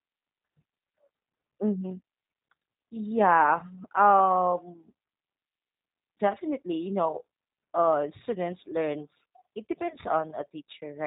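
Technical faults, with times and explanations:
Throughout: G.729 codec. The speech is band-limited, with nothing above 4 kHz, and sounds plainly rough and synthetic, consistent with an 8 kbit/s stream. The decoder rebuilds each 10 ms frame from a vocal-tract filter, pitch predictor and a few pulses, not the true waveform.
9.88 to 9.96 s: VoIP packet loss concealed by the speech codec. The sound briefly smears into a stretched, fading sound, and the recovery stays weak afterwards. This points to one lost 20 ms packet, bridged by extrapolating the previous pitch and filter at falling gain.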